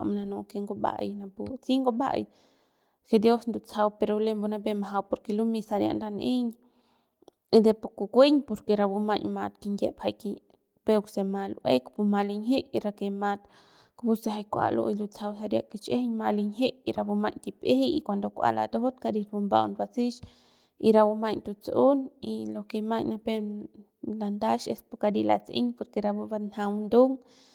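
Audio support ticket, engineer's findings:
No faults found in this speech recording. Opus voice compression at 24 kbps in hybrid mode keeps the full band, with content reaching 20.2 kHz and only light coding damage audible.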